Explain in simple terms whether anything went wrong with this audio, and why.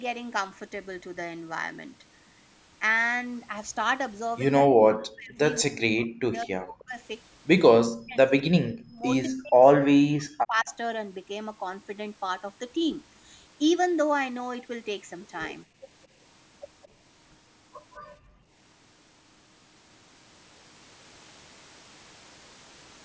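Yes, a few things went wrong. From 4.66 to 5.39, 5.62 to 6.98, 7.71 to 8.17, 8.43 to 9.04 and 9.27 to 10.68 s, the speech nearly vanishes. That's speech suppressed in double talk, likely because the echo canceller got confused while both sides talked and turned everything down.

At 15.66 to 15.83 s and 18.18 to 18.51 s, the room sound briefly dips. That's background gated by the echo canceller, which clamps the mic while the loudspeaker plays.

Around 16.83 to 16.88 s there's a faint, quick echo leak, a copy arriving about 210 ms late, likely leftover loudspeaker sound the canceller didn't fully remove.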